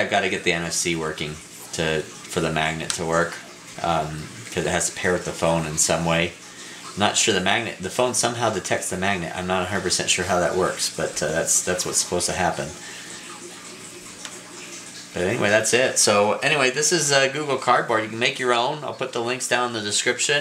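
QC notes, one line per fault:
No faults heard anywhere in the clip.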